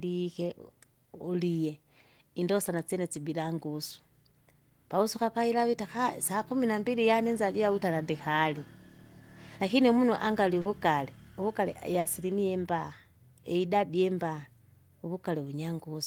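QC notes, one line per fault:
10.61–10.67 s, short concealed packet loss: a brief smear right after "umunu angali", where 40 ms of audio arrived too late and the receiver filled it by extending the preceding sound.
11.99–12.07 s, burst of packet loss: the sound stretches and fades, then jumps ahead, because 60 ms of consecutive packets were lost and the decoder bridged the gap by continuing and attenuating the last sound.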